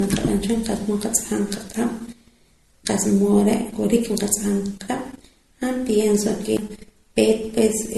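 Throughout the speech, nothing is present above about 12.1 kHz. The sound carries mixed compression artefacts, the different codecs' artefacts heard together. The likely cause is transcoding between lossy codecs. The artefacts point to MP3, then Opus, then MP3 again, at low bitrates. Each later pass coded the earlier damage and added its own. The lowest cut-off in the chain remained.

At 6.57 s, right after "han pienso ke", there is a CD skip. A shock or disc flaw made the laser jump to another track of the spiral. The player muted very briefly, for about 15 ms. Playback then resumed from a different point. It is heard as a tick or short gap and an abrupt jump in the speech, forward or back by one or more disc turns.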